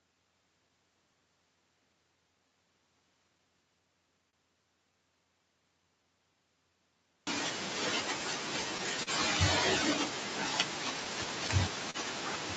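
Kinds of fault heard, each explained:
Clock drift between sender and receiver: The sending device's clock runs about 2% slower than the receiver's, so the jitter buffer keeps draining. The receiver has to stretch the audio to stay in step, and small timing hiccups recur unevenly through the speech.
Repeated timing corrections: To cover the slow sender, the receiver repeatedly inserts short repeated pieces from about 0.15 s to 7.14 s. This plays that stretch at roughly 98% speed and adds around 150 ms overall, heard as a slightly dragging, unsteady tempo.
Short stall from a late packet: The jitter buffer ran empty twice, so the receiver held the last sound until the packet arrived, then resumed without losing anything. This happens at 4.30 to 4.36 s, holding 28 ms, and at 9.03 to 9.10 s, holding 38 ms, each heard as a brief drawn-out sound.
Scattered short gaps: Between 11.05 s and 11.97 s, about three packets arrived late. 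The receiver patched each by continuing the previous sound, filling roughly 50 ms in total, with the longest patch around 40 ms. These are heard as brief smears or ticks in the speech.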